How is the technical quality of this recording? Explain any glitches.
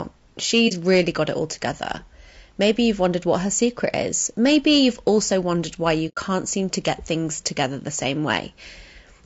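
The recording has audible faults throughout and in several specific places: codec damage for the whole clip, hard clipping in three stretches, and two short muted gaps.

Low-delay AAC compression runs through the entire clip. The speech sounds rough and grainy, with noise filling the gaps between harmonics and a top band that sounds lowered or synthetic. The most likely cause is AAC-ELD, the low-delay AAC used for video calls. The damage is plainly audible, which fits a bitrate of around 32 kbps. Unlike ordinary noise or hiss, the graininess follows the speech and changes with it.

Hard clipping occurs from 0.54 to 1.09 s (just before "got it all together"), from 2.63 to 4.01 s (just after "got it all together"), and from 4.45 to 5.33 s. The signal overran a stage by about 4 dB in the first stretch and about 3 dB in the other two. That stage cut the peaks flat, which adds harmonics high in the spectrum and is heard as crackle on the louder moments. 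Codec grain is present all the time, but this crackle follows the peaks and stays inside these three spans.

AAC frame loss with muting occurs at 0.68 to 0.72 s and at 6.08 to 6.18 s (just before "seem to"). The first is a brief dip of about 30 ms, which fits a single lost frame. The second is a 90 ms hole, consistent with about three frames in a row. The decoder zeroed the missing spectrum, and the overlapping windows faded the sound out and back in. That is why these gaps have soft edges, unlike a hard dropout or splice.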